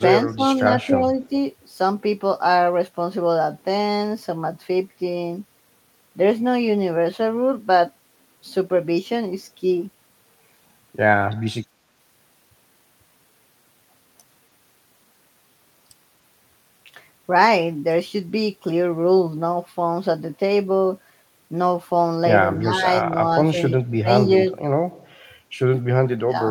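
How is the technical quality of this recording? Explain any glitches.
The recording has two kinds of glitch, clustered near the start and end of the speech.

Speech suppressed in double talk occurs at 0.28–0.42 s, 0.78–1.21 s, 22.6–22.86 s, 23.13–23.17 s, 23.52–24.08 s and 26.22–26.32 s. The voice dips by roughly 5 to 25 dB, deepest around 23.5 s. It is likely an echo canceller ducking during overlapping talk. Waveforms show brief notches, and spectrograms show faded bands.

An echo leak appears at 1.23–1.29 s: a faint copy of the voice delayed 285 ms, about 35 dB below the speech. This is likely loudspeaker pickup that the far side's echo canceller left behind. On a spectrogram it shows as a dim, shifted repeat of the preceding pattern.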